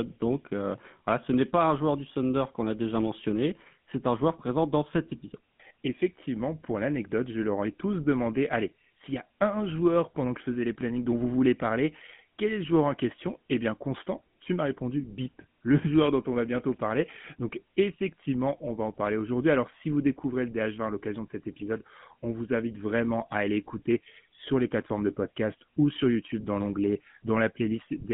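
Throughout, the speech has gone through the GSM full-rate codec, which rebuilds the voice from a vocal-tract model driven by sparse regular pulses, consistent with its 13 kbps mode. This gives a plainly audible buzzy, gravelly roughness in a 150 Hz to 3.5 kHz band, with nothing above 3.7 kHz.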